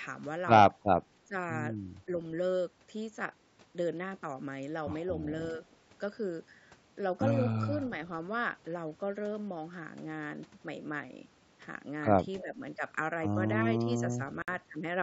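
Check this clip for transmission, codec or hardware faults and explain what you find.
Three kinds of trouble show up in the speech, all of them short, while the band tops out around 8 kHz as the call's microphone processing limits it.

Speech suppressed in double talk hits twice, from 1.25 to 1.34 s and again from 12.42 to 12.54 s. The level dips sharply, by about 15 dB at the first spot and about 10 dB at the second, for roughly a tenth of a second each. That's likely the echo canceller hearing both ends at once, failing to tell the talker from the loudspeaker return, and pulling everything down together.

Echo leak overlaps the second dip, running from 12.39 to 12.55 s. A faint delayed copy of the speech trails the original by 314 ms, sitting about 20 dB below it. The likely story is a loudspeaker on one side whose canceller didn't scrub out everything the mic caught, so some of it got sent back down the line.

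The Bluetooth stall comes near the end, at 14.42 to 14.48 s, where the sound simply drops to silence for 58 ms and then carries on. That's likely a wireless headset running its buffer dry after interference delayed packets, then resuming once the resent audio arrived.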